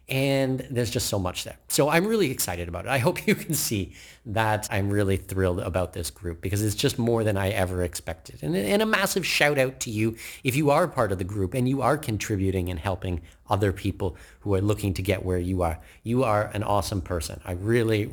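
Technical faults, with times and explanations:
Throughout: crude rate conversion. The speech carries a gritty, inharmonic fizz riding on louder and brighter syllables, roughly 25 dB below the speech. It sounds like a conversion from 44.1 kHz up to 48 kHz done by repeating the nearest sample rather than filtering, so the timing error recurs in a fixed pattern and adds tones unrelated to the speech. Codec artefacts swirl or warble with the content, while this buzz stays rigidly tied to signal level and brightness.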